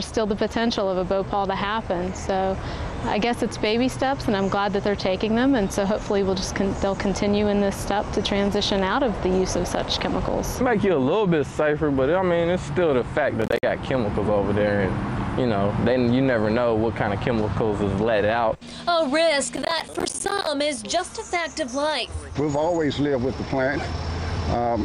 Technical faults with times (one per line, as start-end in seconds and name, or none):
13.42-13.63 processor overload crackle
19.55-20.47 processor overload crackle